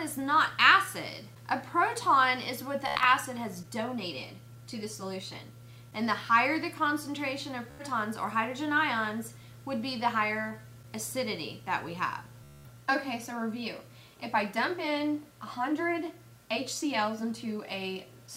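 Bluetooth stutter occurs at 2.88 to 3.05 s, 7.71 to 7.84 s and 12.44 to 12.70 s. Packets arrived late or not at all, and the receiver replayed its last short buffer until fresh data came, giving a buzzing, machine-gun repeat before the sound picks up further on, as if it had kept playing. About 126 ms goes missing in the first burst, spread over 168 ms with an 84 ms longest run, 84 ms in the second and 210 ms in the third.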